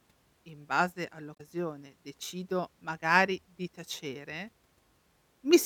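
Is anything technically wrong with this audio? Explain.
Yes, the speech has one fault: damaged data in a compressed stream from 1.32 to 1.41 s. Corrupted bytes make the decoder misread frames and lose sync, producing a brief glitch. A spectrogram shows a short disruption; the waveform breaks abruptly there.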